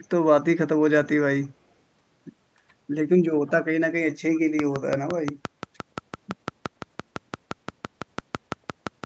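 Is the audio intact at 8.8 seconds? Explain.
No. A train of clicks runs from 4.59 s to the end, about 5.9 regular pulses per second peaking well above the speech, likely interference.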